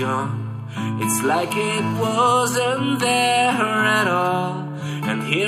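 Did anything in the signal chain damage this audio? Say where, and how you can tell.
Yes. A GSM phone buzz enters at the analogue wiring stage, from 1.24 s to 2.32 s. It is a hard, raspy buzz with a fundamental near 217 Hz and a dense stack of harmonics, sitting about 17 dB below the signal. It bears no relation to the audio beneath it and holds steady throughout, as a call does. A nearby 2G handset pulses its transmitter at that rate. An analogue input rectifies those radio bursts into audible interference.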